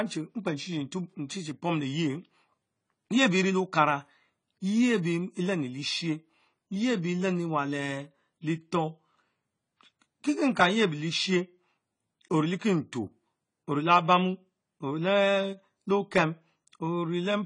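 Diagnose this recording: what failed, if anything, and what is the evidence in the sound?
The trouble sits at the codec stage, and the likely cause is AAC compression, AAC-LC specifically, applied across the whole speech clip. There's nothing above 10 kHz anywhere, so the top end sounds shut off and dull, and the codec damage is plainly audible from start to finish. At a low rate, which fits roughly 24 kbps here, the encoder throws away bits against its hearing model, dropping the cut-off and thinning out spectral detail, so sibilants come out smeared.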